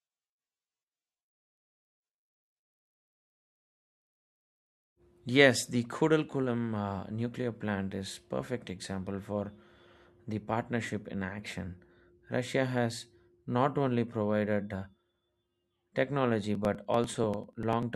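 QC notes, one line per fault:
16.55–17.83 s, periodic USB or driver dropouts: around fifteen skips of a couple of milliseconds, every 0.098 s, as the driver stalls and samples are dropped, giving regular ticks. The waveform shows evenly spaced splice jumps, and a spectrogram shows thin vertical broadband lines.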